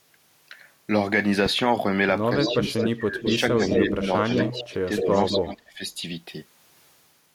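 From 2.38 to 5.82 s, the speech dips and drops out in pieces, falling by around 20 dB. This speech suppressed in double talk most likely comes from an echo canceller turning down both its own talker and the loudspeaker echo. From 2.43 to 5.38 s, a copy of the voice returns 211 ms late, only about 5 dB below it. This echo leak is likely loudspeaker sound that was not fully cancelled.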